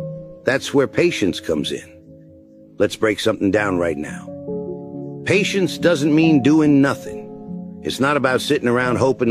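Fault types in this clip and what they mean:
No faults found: nothing in the signal points to a problem in capture, transmission or processing.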